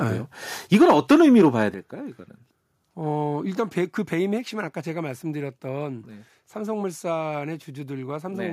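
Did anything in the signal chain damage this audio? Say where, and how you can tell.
Yes. Microphone overload at the analogue-to-converter stage damages 0.73 to 1.63 s. The loudest speech peaks are driven about 5 dB past full scale, so their tops are sheared flat and a few percent of samples sit pinned at the ceiling. That produces a harsh crackle on the strongest syllables. Codec distortion smears or warbles regardless of level, but this crackle appears only on the peaks, which points to an input gain that was likely set too high.

The microphone volume stepped down three times in the call-processing stage: at 0.75 s by about 3 dB, at 1.74 s by about 8 dB, and at 4.38 s by about 2 dB. Each drop is instant, and the speech and the background noise fall together and stay lower. A talker moving away would not lower the room noise, and a compressor would recover afterwards. The first drop coincides with the clipped passage and the second follows just after it, so the likely cause is call software cutting the device gain in response to the overload.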